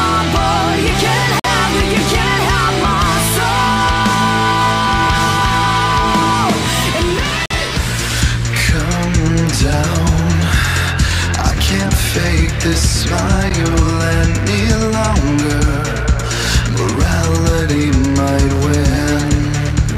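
A gap between stream segments opens at 1.40 to 1.45 s, again at 7.46 to 7.51 s, and once more at 13.50 s, spaced 6 s apart in step with the segment boundaries. Each time, the timestamps of adjoining segments fail to meet, and the player fills the shortfall with silence: about 49 ms, 47 ms and 12 ms of hard-edged dropout. Nothing is lost from the audio itself; it simply resumes slightly late after each hole.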